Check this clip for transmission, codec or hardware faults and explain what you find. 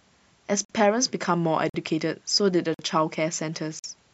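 One fault appears: a gap between chunks. Short, hard-edged silences of about 48 ms interrupt the speech at 0.65–0.70, 1.70–1.74, 2.74–2.79 and 3.79–3.84 s. They recur after each 1.0 s of sound because silence is inserted at every join between chunks.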